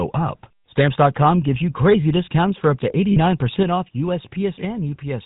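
Throughout the speech there is a buzzy, gravelly roughness, with nothing above 4 kHz. This is the GSM full-rate codec, which fits a 13 kbps GSM full-rate stream. The codec keeps only a model of the vocal tract and drives it with evenly spaced pulses, discarding two excitation samples out of every three. The damage is plainly audible across the whole clip.

From 3.12 to 3.18 s, just after "up to", the sound hangs as a brief, rough, metallic ring instead of moving on. These are lost GSM frames, lasting about 40 ms, which fits two dropped 20 ms frames. The decoder filled the gap by repeating the settings of the last good frame. The loss is short enough that it never fades fully to silence.

At 3.63 s and again at 4.65 s, voice and background both drop suddenly in level, by about 4 dB and then by about 3 dB. Each drop happens as a single step, with no gradual fade. The likely cause is a microphone volume stepped down: the call software judged the input too loud and lowered the device's input volume in one jump, and then did so again a second later.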